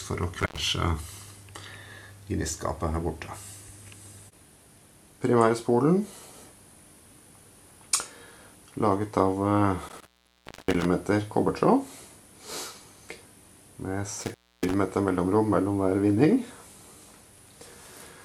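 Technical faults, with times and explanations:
0.40–0.59 s, 9.89–10.85 s and 14.21–14.74 s: intermittent contact. A loose plug or cable briefly opens, so the audio drops out for about 90 ms, 630 ms and 290 ms, with crackle where the connection breaks and remakes, and faint hiss in the gap.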